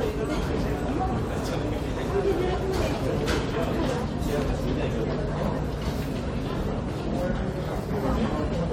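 No technical faults are audible anywhere in these everyday sounds.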